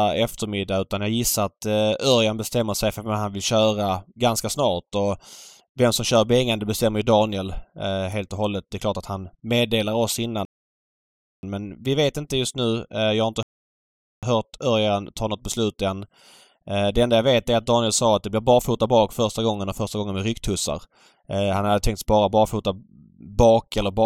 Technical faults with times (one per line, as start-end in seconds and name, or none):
10.45-11.43 rebuffering stall
13.43-14.23 rebuffering stall
19.80 dropped samples